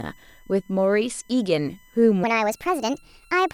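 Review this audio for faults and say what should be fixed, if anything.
A steady USB whine runs under the speech for the whole clip. It is a fixed tone at 1 kHz, strongest at its 2 kHz harmonic, about 35 dB below the speech. That fits current drawn in 1 ms USB frames leaking through a shared power or ground path. Mains hum would sit at 50 or 60 Hz with its own harmonics, and a 1 kHz family points to the bus. Powering the interface separately, or fitting a USB isolator or ground-loop breaker, would prevent it.

From 2.24 s to the end, the section is at the wrong speed. It plays 1.36 times too fast, so the speech turns hurried and rises roughly five semitones. Pitch and tempo shift together in one step, which sets this apart from a pitch-shift effect or naturally faster talking, where timing and pitch move independently. This is likely playback or editing against the wrong sample clock for that segment. 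Matching the sample rate and clock settings across every segment of the edit would prevent it.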